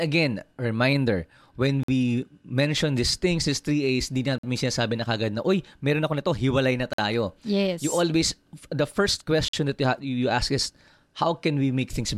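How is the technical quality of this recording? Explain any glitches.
The recording is marred by a repeating gap between chunks at 1.83, 4.38, 6.93 and 9.48 s, the first falling after "again reminder when". The audio was delivered in 2.5-second chunks with a 50 ms silence inserted at each join, so the speech drops out in brief, hard-edged holes on a steady beat.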